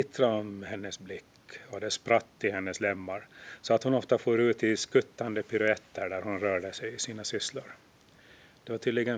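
No technical faults are audible in the speech, and the faint background of the room sits about 38 dB beneath it.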